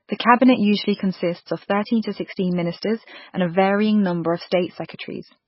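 MP3 compression runs throughout the speech, most likely from an encoder starved of bits, which fits a very low rate of about 16 kbps. Nothing survives above 5.6 kHz, and weak frequency lines flicker in and out between frames, leaving heavy watery, swirling smear and dulled consonant attacks.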